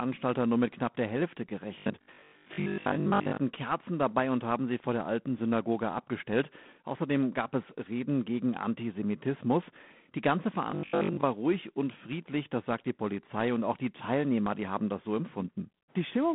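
Right from the start the whole clip carries G.726 ADPCM damage at 24 kbit/s. That means three bits per sample describing the difference from a running prediction, which is too coarse to track the speech cleanly. You get a harsh, rasping hiss that swells and drops with the speech level. The line band runs from about 150 Hz to 3.5 kHz, and nothing gets through above 3.8 kHz, so it's boxed-in telephone sound.

From 1.78 to 3.38 s the speech turns into robotic sound from repeated short buffers. A rigid, metallic buzz sits on top, pitched at 50 Hz. That fits a 20 ms chunk being played over and over when fresh audio didn't arrive in time, with roughly 70 percent of the stretch being repeats rather than new material. The likely cause is a starved playback buffer. The same buzz comes back from 10.71 to 11.25 s, ending just before "ruhig und friedlich das". It's the same 50 Hz drone, and the speech only loosely follows through it.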